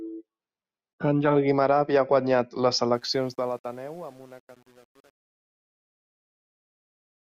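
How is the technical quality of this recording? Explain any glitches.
The recording has one clear glitch, on the fade-out at the end of the speech.

From 2.94 s to the end, at 7.35 s, there is truncation distortion on a fade. As the level falls, the gain stage rounds the signal to a coarse step with no dither, which fits an 8-bit stage. From about 3.4 s onward the tail turns gritty. The fade starts around 3 s. What sets this apart from background noise or a gate is that the roughness worsens steadily as the level sinks.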